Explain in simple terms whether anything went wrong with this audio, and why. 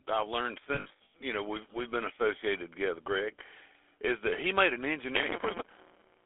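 Several things went wrong. The whole recording passed through the GSM full-rate codec, an old mobile phone speech coder. It rebuilds the voice from a simple model and pulses, so the speech sounds clearly buzzy and gravelly. Nothing below about 300 Hz or above 3.5 kHz gets through.

There is also automatic gain rising from 0.13 to 3.11 s. The phone's level control decided the input was too quiet. It slowly turned the volume up, so the voice and the background both swell louder together over those three seconds.

Between 0.74 and 1.15 s you hear lost GSM frames. Pieces of the signal went missing, adding up to about 300 ms. Each gap was filled by repeating the last good piece. This gives a rough, metallic, held-over ringing. The longest gap lasts roughly a tenth of a second.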